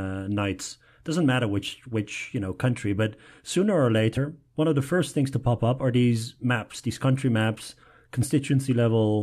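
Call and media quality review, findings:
Short glitch at 4.16 s, just before "one of the first". Damaged data in the compressed stream: corrupted bytes make the decoder misread the frame and resync at the next header.

Second blip, 6.78–6.80 s, between "pop up are these" and "these country maps". Same fault, compressed stream corruption: decoder loses frame sync and emits garbage until it finds a valid header.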